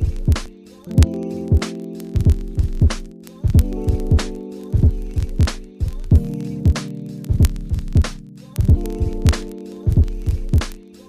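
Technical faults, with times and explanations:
0.12–11.08 s, word clock ticks: a roughly 0.1% clock mismatch on the digital link slips one sample about every 20 ms, giving a steady stream of sharp ticks.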